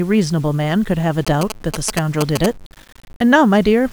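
The clip is speech. Throughout, the sound is grainy, and the graininess shifts with the voice. Quiet passages turn gritty rather than hissy. This is low bit depth without dither, likely about 7 bits, rounded. The error sits roughly 30 dB below the speech. From 1.27 to 2.46 s, GSM signalling bursts intrude. A galloping dit-dit-dit of short 217 Hz buzzes appears, nearly as loud as the speech itself. A nearby 2G phone is exchanging brief radio bursts with the network, and the audio circuit rectifies them.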